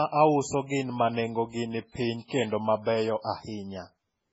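MP3 compression runs throughout the speech. Nothing remains above 7.6 kHz, and the damage is heavy: watery, swirling texture, chirpy sibilants and smeared attacks. The likely cause is an MP3 encoder starved of bits, consistent with roughly 16 kbps, cutting the treble and dropping weak spectral lines frame to frame.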